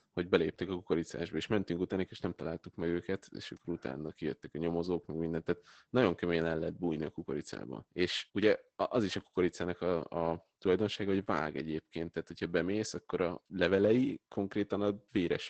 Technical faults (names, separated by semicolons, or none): Opus voice compression